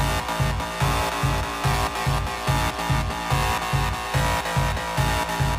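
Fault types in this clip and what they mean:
None: there are no fault types in this clip, so there is nothing here for them to mean.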